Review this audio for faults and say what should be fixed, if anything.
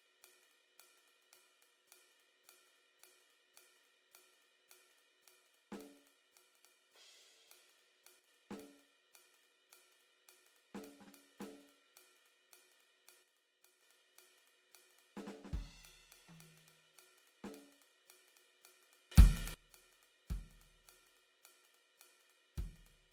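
The whole track carries plainly audible Opus compression: the music sounds grainy and rough, with tones turning noisy, though the top end still reaches about 20.4 kHz. That fits the codec's music mode likely running near 24 kbps, where bands get filled rather than left empty. Encoding at a higher bitrate would keep it clean.

There's a sudden gain jump at 8.19 to 8.28 s and another at 13.23 to 13.82 s, each dropping about 6 dB, plus one at 19.12 to 19.54 s jumping up about 20 dB. The music and its background shift level together in a single step, likely from a gain change applied with no ramp. Smoothing any gain change over a few milliseconds would prevent it.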